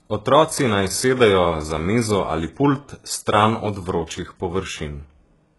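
Throughout, a codec has likely rebuilt the treble from copied lower bands, as HE-AAC compression does, which fits a very low bitrate around 12 kbps. The damage is heavy: s sounds turn gritty and metallic, and nothing reaches above 11.5 kHz.

From 0.42 to 2.45 s, switching spikes from the 50 Hz supply leak in as mains buzz, a steady raspy drone sitting around 30 dB below the speech.

From 4.06 to 4.09 s, quantisation noise spread across a transform block lands before an attack as pre-echo, a 29 ms hiss that softens and smears the onset.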